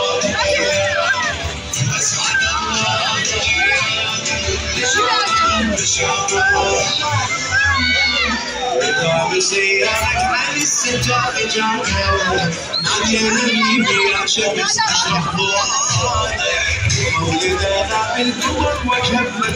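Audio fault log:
Throughout: MP2 compression. The whole clip sounds dull and plainly gurgling, with a granular roughness and a top end that seems to come and go. The likely cause is MPEG Layer II coding at a low rate, around 80 kbps by the sound of it. Starved of bits, upper sub-bands are switched off and the rest coarsely quantised. It differs from MP3 or AAC artefacts in its banded, flickering dullness rather than swirly pre-echo or metallic warble.
15.24 to 15.26 s: DAB burbling. A brief patch of a few watery blips breaks through the sound for a few tens of milliseconds, spanning what seems to be about three coding frames. Corrupted data reached the decoder past the error correction at a low error rate, so wrong samples put short blips of noise into single sub-bands. Unlike the steady compression dullness, it is a sudden, isolated burst with a watery, blipping character rather than a click or dropout.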